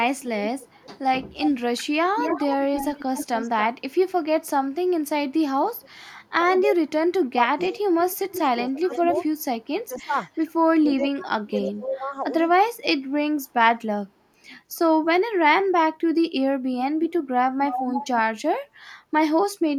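From 0.21 to 3.61 s there is an echo leak. A delayed copy of the speech trails 323 ms behind, about 10 dB below it. The far side's echo canceller likely let its loudspeaker pickup through. A faint scrap returns at 5.81 s, 271 ms late and about 30 dB down.

From 6.42 to 7.73 s the speech is suppressed in double talk. The voice dips in pieces, by up to about 30 dB, for under a second in total. The canceller likely mistook the talker for echo while both sides spoke.

The echo returns from 7.74 to 11.05 s, 313 ms late and about 10 dB down. Suppression overlaps it from 8.71 to 12.78 s, cutting the voice by up to about 25 dB in bits totalling roughly two seconds.

From 17.01 to 18.07 s the echo is strongest. It is 313 ms late and only about 5 dB below the speech.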